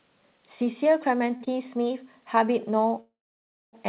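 Short stalls from late packets occur at 1.36 to 1.42 s and again at 1.44 to 1.48 s. A packet arrived late, the jitter buffer ran dry, and the receiver stretched the last sound by 44 ms and then 18 ms. The speech briefly hangs with a faint buzz or dip before resuming with nothing lost.

A call audio freeze runs from 3.00 to 3.75 s. The sound stops moving forward and trails into silence for about 620 ms of the 726 ms pause. It then picks up exactly where it left off, most likely because packets were held up in transit and the buffer emptied.

Through all of this the band stops at 4 kHz, which points to a narrowband call codec such as G.711 A-law.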